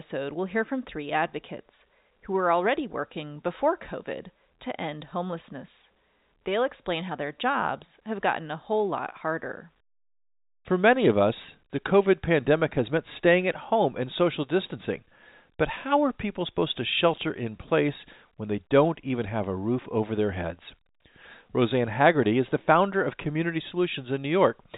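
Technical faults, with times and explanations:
The speech carries the usual traits of G.711 A-law telephone coding at 64 kbps, with nothing above 4 kHz and at most a faint quantisation noise that follows the signal's level, and there is no technical fault to report.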